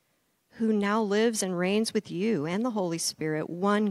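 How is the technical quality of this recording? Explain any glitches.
The recording has no technical faults to report. There are no glitches in it to explain.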